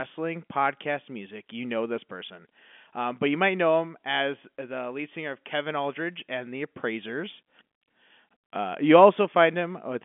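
Speech with no technical faults.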